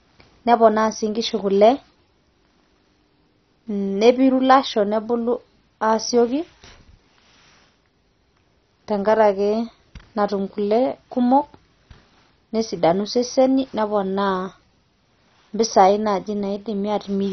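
Speech, with heavy MP2 compression damage throughout. Nothing is heard above 6.1 kHz, so it sounds dull. The remaining bands flicker and gurgle with coarse, granular grit. The likely cause is MPEG Layer II starving upper sub-bands of bits, which fits roughly 32 kbps.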